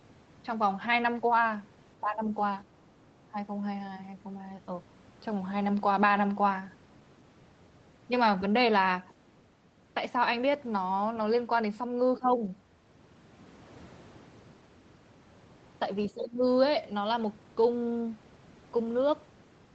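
The speech sags in four brief patches: at 1.99 to 2.27 s, 3.29 to 3.37 s, 12.19 to 12.43 s and 16.11 to 16.42 s. Each dip lasts a fraction of a second, about 15 dB deep at its worst in the first and last, shallower in the other two. This is speech suppressed in double talk, likely from an echo canceller that, with both ends talking at once, mistook the near voice for loudspeaker echo and pulled it down.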